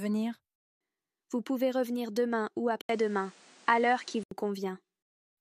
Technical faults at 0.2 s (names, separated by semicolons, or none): none